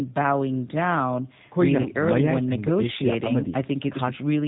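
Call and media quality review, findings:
G.729 codec, whole clip: speech band-limited with nothing above 4 kHz, plus a plainly rough, synthetic sound from pulse-excited filter rebuilding, consistent with an 8 kbit/s G.729A path. Unlike a simple low-pass, the texture itself is grainy, not merely dull.

VoIP packet loss concealed by the speech codec, 1.81–1.90 s: about 40 ms of missing speech, likely two lost 20 ms packets, replaced by stretched sound that fades, with weak, distorted recovery afterward. Not a silent dropout: the hole is filled, then slowly heals.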